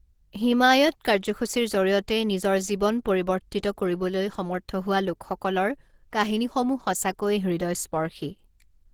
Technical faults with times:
0.00-8.94 Opus compression

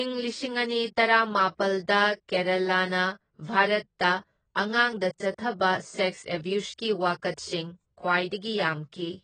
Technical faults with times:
0.00-9.23 AAC compression

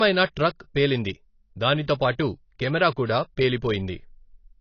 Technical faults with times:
0.00-4.60 AAC compression
1.94-2.00 pre-echo

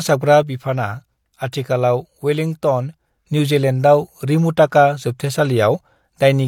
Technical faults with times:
0.43-3.27 sudden gain jump
1.52 pre-echo

